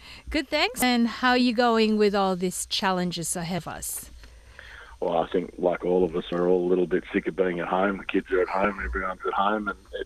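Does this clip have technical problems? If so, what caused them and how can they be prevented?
Yes. Brief chirps, squawks, clicks or short holes occur at 0.79 to 0.82 s, 3.58 s, 6.29 to 6.32 s and 8.62 to 8.65 s. This is damaged data in a compressed stream: corrupted bytes make the decoder lose sync and jump to the next frame header. Verified transfers and checksummed storage would prevent it.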